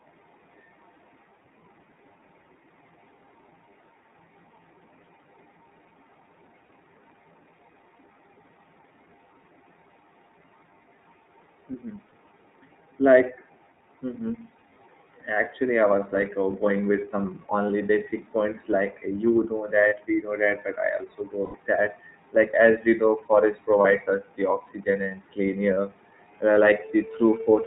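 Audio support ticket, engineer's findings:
Speech band-limited to 4 kHz throughout. Slightly rough, synthetic texture; codec damage plainly audible. Probable component: iLBC codec, which fits its 13.33 kbps mode with 30 ms frames. Mechanism: narrowband coding drops all content above 4 kHz. Each frame's excitation coded independently.

Lost iLBC frames. Short held, buzzy vowel-like fills at 6.66, 12.09, 19.89, 23.81 and 25.74 s, each about 30 ms. Longer fill at 21.45–21.57 s, about 90 ms, right after "also go". The 23.81 s gap falls between "as we know forest" and "us the oxygen and". The 25.74 s gap follows "the oxygen and clean". Mechanism: decoder concealment repeats the last pitch cycle mixed with noise, fading over the longer gap. Speech recovers almost at once.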